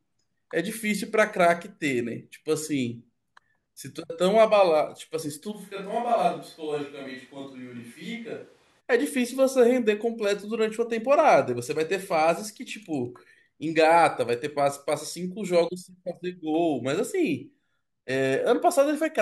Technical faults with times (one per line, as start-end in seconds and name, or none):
5.53-8.79 switch to a distant microphone